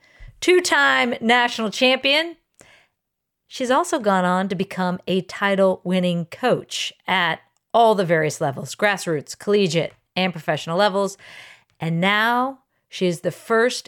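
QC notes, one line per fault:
No technical faults were found on this speech recording, and the signal holds steady with nothing in it calling for a QC entry.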